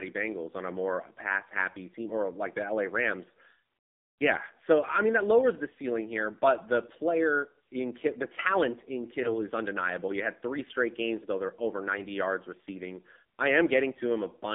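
AMR narrowband mobile codec, throughout: the speech is squeezed into roughly 200 Hz to 3.6 kHz and rebuilt from a coarse vocal-tract model. The plainly buzzy, synthetic edge points to a low-rate mode of around 7.4 kbps, with sibilants dulled and harmonics smeared.

AMR bit errors, from 9.24 to 9.31 s (between "the talent in" and "is undeniable") and from 11.94 to 12.04 s (between "games though they're over" and "yards receiving I"): flipped bits in weakly protected parts of a few frames misplace the excitation pulses. Pitch and level hold roughly steady, but each burst turns briefly hoarse, scratchy and gargly.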